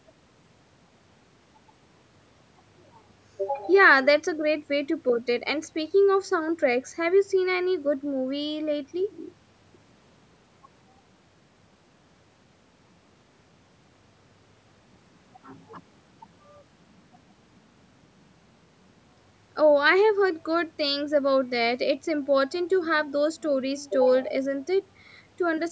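No technical faults can be heard anywhere in the speech. It has passed through a call's microphone processing, which trims the lowest bass and leaves nothing above 8 kHz, as such a path normally does.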